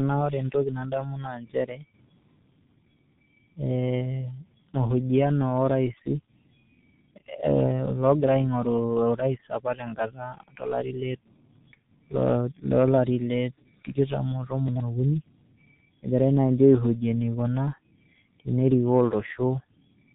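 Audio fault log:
throughout: tandem speech coding. The call passed through CVSD, then G.711 A-law, then G.723.1 at 6.3 kbit/s, decoding and re-encoding at each border. Each coder stacked its errors on the last, leaving rough, muffled, warbly speech with nothing above 3.8 kHz.
14.68 to 14.8 s: chunks out of order. One 40 ms chunk arrived two chunks late and played after the two chunks meant to follow it. Nothing is missing, but the scrambled order and three hard joins produce a brief jumbled moment.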